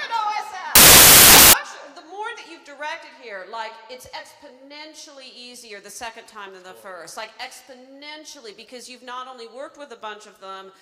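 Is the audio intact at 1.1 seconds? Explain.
No. From 0.75 to 1.53 s the samples are built from the wrong bytes: the reader misaligns or swaps each sample's bytes, so the rapidly changing low bits become the dominant part of every value, turning the sound into loud, harsh broadband noise.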